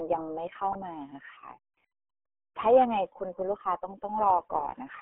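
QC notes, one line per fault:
throughout: RealAudio 14.4 codec. A dial-up-era coder, consistent with about 8 kbit/s, strips everything above 3.8 kHz, leaving the speech heavily muffled, gargly and thin.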